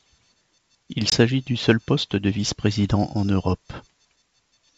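Packet loss on the ADPCM call drops about 20 ms of audio, likely a single packet, between 1.10 and 1.13 s, leaving a hard-edged silent gap. The decoder's predictor and step size lose track of the sender's, so the speech resuming at "du seul poste de" returns briefly with slight distortion.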